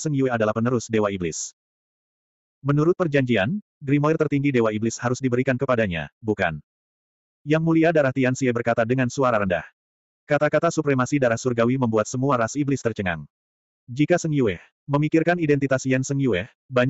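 No technical faults can be heard in this audio.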